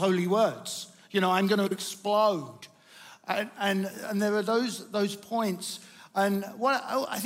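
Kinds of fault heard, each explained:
Frames out of order: around 1.67 to 1.77 s, two neighbouring runs of frames, each about 43 ms, play swapped, so that stretch comes out as a garbled flutter. Nothing goes missing; the pieces are just shuffled.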